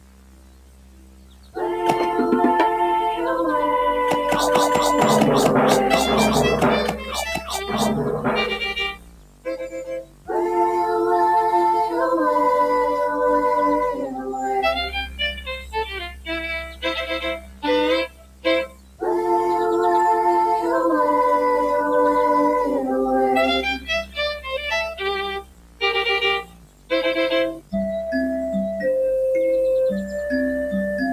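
Right from the start the whole clip has a gritty, grainy edge that follows the sound itself, with the error sitting only about 25 dB below the signal. Quiet passages crumble and the faintest bits sputter. That's likely low bit depth without dither, something like 6 bits with plain rounding.

A noise suppressor applied to music or sounds is also running throughout. It treats sustained material and tails as noise and pulls them down, so the level pumps and thins by around 15 dB while attacks still punch through.

Sound cut by the noise suppressor shows up six times: 0 to 1.57 s, 6.92 to 10.31 s, 13.94 to 19.02 s, 23.78 to 25.82 s, 26.42 to 26.91 s, and 27.54 to 27.74 s. Held or decaying parts sink by about 17 to 18 dB there, and their tails get chopped short.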